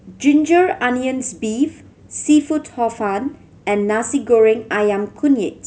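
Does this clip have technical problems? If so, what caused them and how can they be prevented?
No technical faults are audible.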